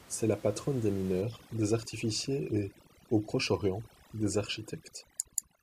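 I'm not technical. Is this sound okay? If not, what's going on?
No. From about 1.2 s right to the end there's overdone noise removal: a cleanup tool set too hard keeps switching off bits of sound it mistakes for background hiss. That leaves a background that drops away and breaks up into little twinkly specks. The faint room noise is just part of the recording.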